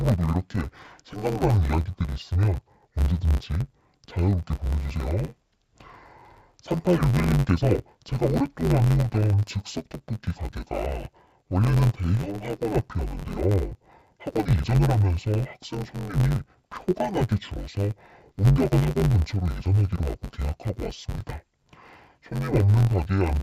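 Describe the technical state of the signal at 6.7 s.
At 6.7 s you're hearing interleaved audio read as planar, present throughout the whole clip. Blocks of about 10.7 ms, which fits a 512-sample buffer, get split into half-speed left and right halves. The speech comes out dull and robotic, buzzing at roughly 94 Hz.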